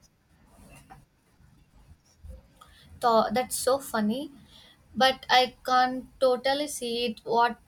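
At 4.15 s the speech carries a single sharp click, the mark of dropped samples. The sound is not interrupted; instead the waveform steps abruptly from one value to a later one, and that discontinuity produces a brief broadband tick, visible as a thin vertical line across the spectrum. The likely cause is a couple of samples missing from the stream, a gap well under a millisecond, far too short to remove any audible sound.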